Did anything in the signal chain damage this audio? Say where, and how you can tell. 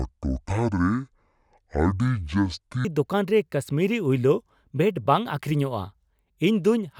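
Yes. From the start to 2.85 s the speech plays at about 0.55 times its proper speed, so it drags and sits roughly ten semitones low, then snaps to normal pitch and tempo. This section at the wrong speed is likely a playback or editing stage running the audio against the wrong clock. On a spectrogram, harmonics and formants sit compressed toward the bottom before jumping upward at 2.85 s. In the waveform, the cycles there look visibly stretched.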